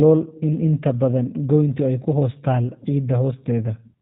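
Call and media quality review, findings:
G.729 codec damage, throughout: speech rough, slightly synthetic, buzzy. Spectrogram shows a hard ceiling at 4 kHz and smeared harmonics. Probable component: narrowband VoIP codec rebuilding each 10 ms frame from a filter plus sparse pulses, which fits 8 kbit/s G.729A.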